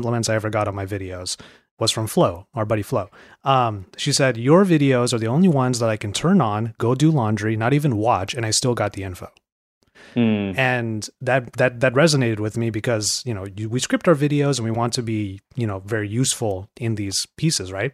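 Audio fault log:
No audible faults found.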